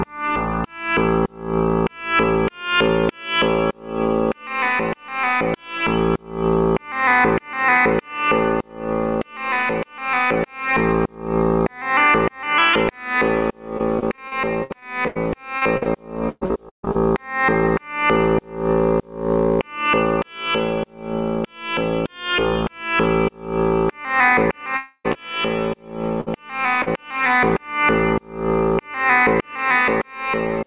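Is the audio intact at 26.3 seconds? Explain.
No. A burst of packet loss hits from 26.21 to 26.28 s. The last sound is held for about 57 ms, fading, then about 60 ms of audio is missing.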